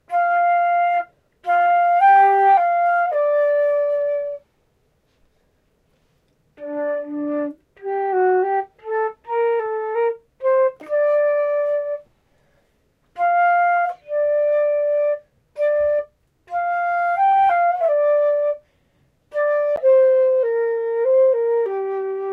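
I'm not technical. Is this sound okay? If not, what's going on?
No. At 19.76 s there's a CD skip. A jolt or a flaw on the disc made the player's laser jump to another turn of the disc's spiral track. The player goes silent for a tiny fraction of a second, which you hear as a small tick, and then carries on from a different spot. The sound lurches instead of flowing on smoothly.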